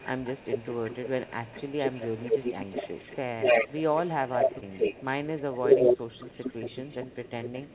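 From the very start to about 5.19 s there's an echo leak: a second copy of the speech trails the original by 212 ms, about 5 dB louder than the talker. It's likely the far end's loudspeaker feeding its microphone, with the echo canceller letting it through.

Inside that stretch, from 0.13 to 0.23 s, the talker ducks hard, a deep dip of around 15 dB. That's speech suppressed in double talk. The canceller likely couldn't tell the voice from the echo and pulled both down.

At 4.58 to 4.64 s there's a short concealed packet loss. About 40 ms went missing and was patched by stretching the preceding sound over 38 ms, so you get a quick smeary wobble.

Another brief double-talk dip, shallower at around 10 dB, hits 5.26 to 5.30 s. Then the echo leak returns from 5.37 s to the end, now delayed by 230 ms. It's likely the same loudspeaker path, with the same doubled, trailing sound, all within the narrowband call audio that tops out near 4 kHz.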